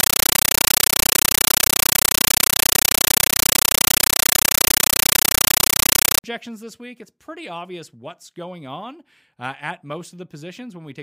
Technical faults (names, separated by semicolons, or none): compressed stream played as audio